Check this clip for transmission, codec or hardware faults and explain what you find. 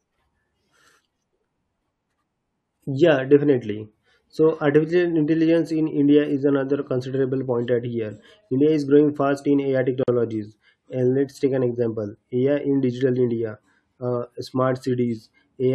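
There's one fault in this speech clip: a gap at a join of encoded pieces at 10.03 s. Separately encoded segments were butted together untrimmed, so encoder delay and end padding leave a gap of about 47 ms with smeared edges, then the speech resumes where it stopped.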